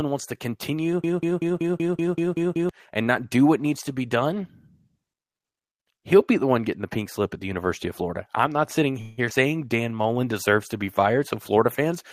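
After "wants to continue", from 1.04 to 2.69 s, a broken-record loop repeats one 190 ms fragment nine times; a stalled player or stream likely caused it, and unlike a freeze, the intervening audio is lost.

Following "I'm not sitting", at 9.01 to 9.20 s, a call audio freeze fills 162 ms with fading continuation of the last sound, without silence; the speech then resumes intact, delayed rather than cut.

At 9.30 to 9.32 s, a skip ahead drops roughly 70 ms, joining the two sides almost directly, so content vanishes instead of stalling.

From 9.77 to 10.15 s, just before "deserves to be fired", a jitter buffer slow-down stretches speech to 86% speed, adding 61 ms at unchanged pitch, drawn out by repeated pitch periods.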